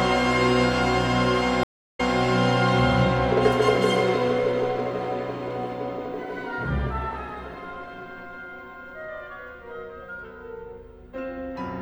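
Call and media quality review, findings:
Gap at 1.63–2.20 s: 0.30 s silence, then audio replays 0.26 s already heard. Stream reconnect: the fresh decoder restarted on a resent server burst.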